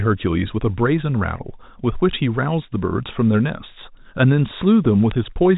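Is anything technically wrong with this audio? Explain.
Yes. At 5.11 s, near the end of the speech, there are bit errors on a digital phone line. A few flipped bits in the G.711 mu-law stream, at a rate of roughly a fraction of a percent, each corrupt a single sample, and those that hit a high bit or the sign of a loud sample cause a sharp tick. The waveform shows isolated one-sample spikes, and the spectrogram shows a thin vertical streak reaching the 4 kHz band edge of the telephone coding.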